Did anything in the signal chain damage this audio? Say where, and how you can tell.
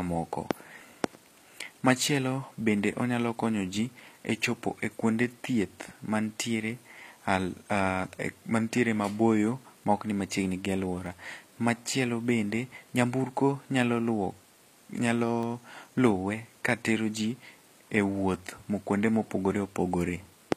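Yes. Across the whole clip, the high band of the speech sounds synthetic. Sibilants are gritty and lisping, and the treble is bright but unnatural. This points to the codec stage, most likely HE-AAC compression at a low bitrate, which fits roughly 24 kbps. Only the lower spectrum is truly coded. The top is rebuilt by copying lower bands upward, so harmonics there don't align with those below. On a spectrogram the upper region looks smeared and repetitive, and there is a hard ceiling at 14.9 kHz.

The second fault sits at the driver or buffer stage: clock drift buffer slips. Regular clicks recur every 1.46 s, from 0.86 s to 19.80 s. That steady spacing is the giveaway. Two devices on separate clocks, likely mismatched by around 150 ppm, let the buffer creep until a handful of samples is dropped or repeated. On a waveform, each slip appears as a discontinuity at that fixed interval. On a spectrogram, it shows as vertical broadband lines.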